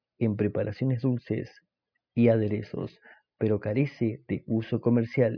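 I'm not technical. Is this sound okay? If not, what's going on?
Yes, this recording is technically sound, with nothing going wrong in how it was captured or played back.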